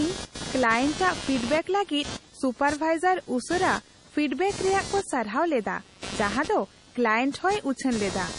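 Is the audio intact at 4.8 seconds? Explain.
No. At 4.8 seconds, as through the whole clip, computer activity noise sits under the speech: a buzzing, chirping pattern pulsing at roughly 200 times a second, about 15 dB below the speech. It comes from processor, graphics or mouse load shifting the ground shared with the audio circuit, so it rises and falls with the computer's workload rather than the speech. That independence from the talker separates it from steady mains hum.

The speech is also heavily damaged by what is likely MP3 compression, present throughout. Nothing remains above 10.6 kHz, a fixed treble cut-off, and the damage fits a low bitrate near 32 kbps. Short of bits, the encoder drops weak frequency lines that flicker on and off from frame to frame, giving a watery, swirly texture, metallic chirps on s sounds and smeared attacks. Unlike the computer noise, this damage follows the speech itself.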